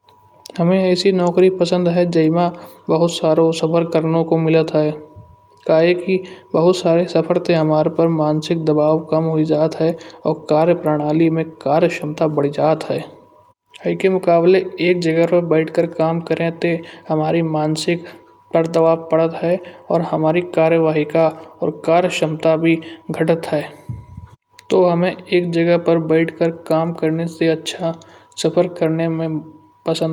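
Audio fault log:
Nothing stood out on listening to the speech.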